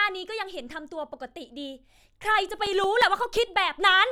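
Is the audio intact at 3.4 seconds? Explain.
No, 3.4 s falls inside a run of CD scratch ticks from 2.49 to 3.54 s: seven brief clicks, the longest about 5 ms, where the player patched over damaged data it couldn't correct.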